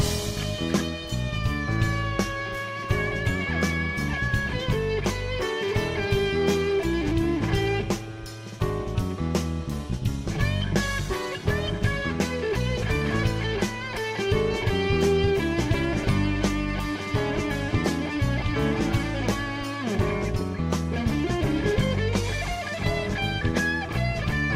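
No technical faults can be heard anywhere in the clip. Nothing in the recording or playback chain draws attention to itself at any point.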